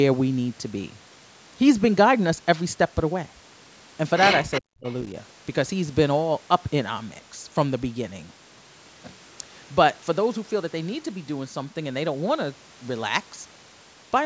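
From 4.51 to 4.61 s a delayed copy of the speech shows up, trailing the original by 374 ms and sitting roughly 10 dB below it. This is an echo leak, likely from a loudspeaker on one side of the call whose echo canceller let part of the returned sound slip through. A much weaker scrap of the same echo, around 30 dB down, returns briefly at 4.87 to 4.91 s.

Between those two moments, from 4.61 to 4.87 s, the speech sinks sharply, dropping by around 40 dB over about a third of a second. This is speech suppressed in double talk, likely where the echo canceller, faced with both sides at once, could not tell local speech from echo and turned everything down.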